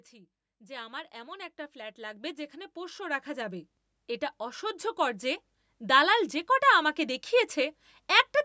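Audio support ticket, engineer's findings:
Automatic gain rising: AGC judged input too quiet and ramped gain up gradually, about 13 dB across 0.1–3.75 s, then about 5 dB across 4.6–6.38 s, just before "কটা আমাকে". Speech and background noise swell together; call microphone processing limits the band to 8 kHz.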